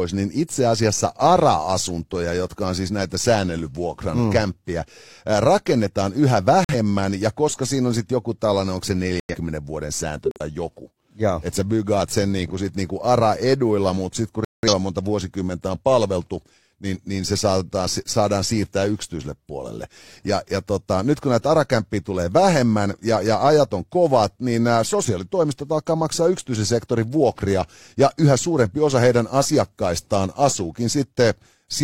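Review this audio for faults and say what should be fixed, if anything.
Corrupt frame muted at 6.64–6.75 s after "mm kämppiä rakennetaan yhä", 9.20–9.36 s after "joku tällainen onko se", 10.25–10.41 s, and 14.45–14.73 s after "mutta sitten kun". Damaged compressed frames were rejected by the decoder and replaced with silence, so the speech cuts out abruptly without shifting timing. The gap lengths fit one, three, three and about six frames. Adding error-protected transport or retransmission, with concealment in place of hard muting, would prevent these holes.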